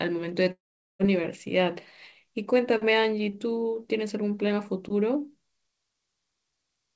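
A long network dropout runs from 0.52 to 1.01 s in this speech clip, which passes through a G.722 call path with nothing above 8 kHz. Here the sound turns into a fading buzz or hiss as the receiver stretches the last received audio, then drops to silence for about 420 ms before speech resumes. The likely cause is a run of lost packets, with roughly 480 ms of the original audio never arriving and never played.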